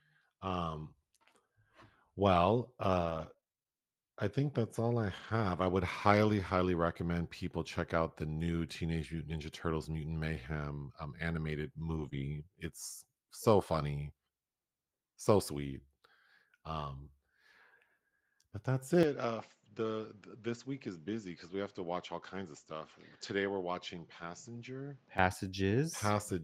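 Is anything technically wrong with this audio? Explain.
Yes, there are a few network and capture problems in this speech.

From 3.01 to 5.30 s there are scattered short gaps: about ten lost or late packets, each hole no longer than about 20 ms, patched by extending the previous sound. It comes across as light ticks and hiccups.

From 11.90 to 12.08 s, and again from 12.13 to 12.19 s, there's a lost packet rebuilt from error correction. The decoder played low-bitrate backup copies carried in the following packets, so the audio there sounds rougher and grainier rather than gapped.

Between those, from 12.10 to 12.13 s, there's a short concealed packet loss. Nothing arrived in time, so the receiver stretched the last sound and blended back, which gives a quick smear.

From 19.03 to 25.18 s the input switches to a poorer device, likely a different mic or a headset call profile. Nothing comes through above 7.6 kHz, the level drops by about 10 dB, and new noise sits about 35 dB under the speech. 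There's no silence at the change, just an abrupt duller tone.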